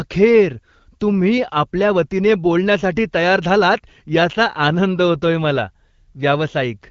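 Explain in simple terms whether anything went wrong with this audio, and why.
Nothing stood out on listening: the speech comes through the HD Voice phone codec just as that kind of call normally sounds, with no dropouts, glitches or sudden changes at any point.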